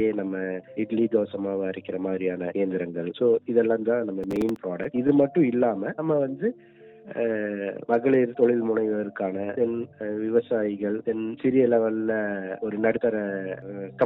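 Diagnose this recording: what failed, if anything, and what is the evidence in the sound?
Processor overload crackle, 4.23 to 4.56 s, at the driver or buffer stage: a short burst of gritty crackle rides on the sound. Several audio buffers of roughly 5 ms missed their deadlines in quick succession, and each hole was filled with stale audio whose hard edges produce the grit.

Repeated stalls (stutter), 4.83 to 5.50 s, at the network and jitter buffer: the sound hitches six times. Packets arrived late, the buffer ran dry, and the receiver stretched the last sound to bridge each wait, 55 ms in total, longest 14 ms. Nothing is lost, but the flow drags.

Jitter buffer slow-down, 6.37 to 7.37 s, in call processing: the audio plays at about 91% speed with unchanged pitch, so sounds are drawn out. The receiver repeated single pitch periods to rebuild its reserve, adding 101 ms over that second.

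Jitter buffer speed-up, 9.42 to 9.93 s, in call processing: the audio runs at about 113% speed with unchanged pitch and sounds hurried. With too much audio queued, the receiver cut short pitch-period pieces, removing roughly 70 ms to bring the delay down.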